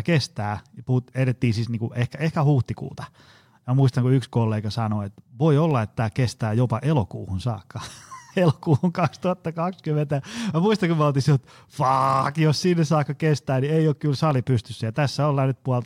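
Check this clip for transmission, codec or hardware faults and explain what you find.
Two brief clicks point to dropped samples, at 5.71 s and 14.31 s in this speech. The likely cause is the stream losing a tiny run of samples, a fraction of a millisecond each time, so the waveform leaps straight from one value to a later one instead of moving smoothly between them. The loss is far too short to remove any audible sound. What remains is a single sharp click at each moment, seen as a thin vertical line across the spectrum.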